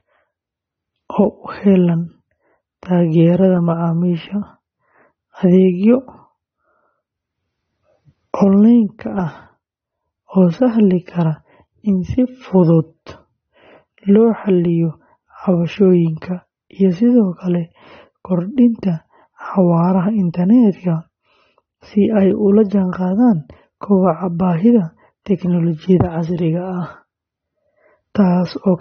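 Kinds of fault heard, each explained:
Low-bitrate audio saved at a high bitrate: the speech sounds dull, with nothing above 6.3 kHz, likely a low-bitrate encode re-saved as high-bitrate MP3, which restores nothing lost.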